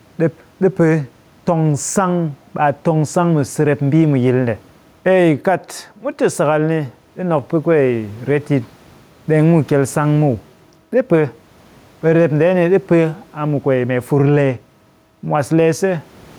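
Gain pumping runs through the whole speech clip. The background room noise sits about 36 dB below the speech, and the gain ducks by roughly 5 dB under each loud syllable, likely because excessive input gain drives a fast limiter that squashes the dynamics.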